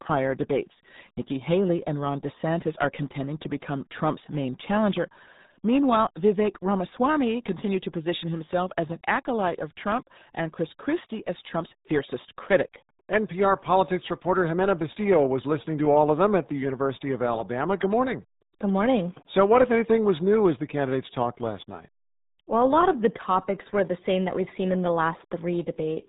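From start to finish, the speech carries the sound of the RealAudio 14.4 codec. It is the old RealAudio 1 format built for dial-up modems. The damage is heavy. Everything above about 3.8 kHz is gone, so the top end is simply cut away. What remains sounds muffled and gargly. The coder squeezes the signal into a tiny data stream, which fits a rate of around 8 kbit/s. Detail smears into a wet, bubbling texture.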